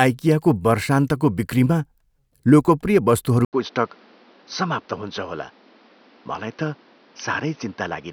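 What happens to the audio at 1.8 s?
Nothing goes wrong at 1.8 s; the speech carries on intact through that moment, with no dropout, click, glitch or other fault to be heard.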